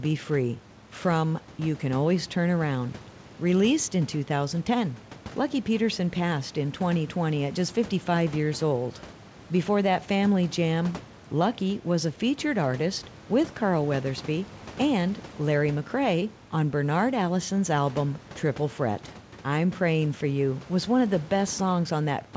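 Speech over a call path whose spectrum stops at 8 kHz, consistent with G.722 at 64 kbps, with room noise sitting about 21 dB below the speech: no technical faults found.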